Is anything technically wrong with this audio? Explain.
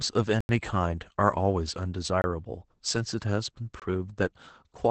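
Yes. Throughout, the speech carries Opus voice compression: it sounds muffled, slightly hoarse and robotic, with nothing above about 8.6 kHz. That fits the SILK linear-prediction coder in wideband mode at a low bitrate near 12 kbps, which codes the excitation coarsely.

There are three blocks of digital silence, at 0.41–0.49 s (85 ms), 2.22–2.24 s (21 ms) and 3.80–3.82 s (21 ms). The sound cuts out abruptly and returns with no fade. The first is heard as a short hole. Their lengths fit unfilled 4096- and 1024-sample output buffers.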